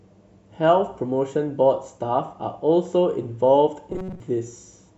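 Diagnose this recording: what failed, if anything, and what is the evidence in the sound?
Between 3.90 and 4.20 s the speech turns into robotic sound from repeated short buffers, a rigid metallic buzz at 188 Hz covering most of that span. The likely cause is a buffer underrun replaying a chunk of about 5.3 ms. Unlike codec warble, the pitch stays fixed.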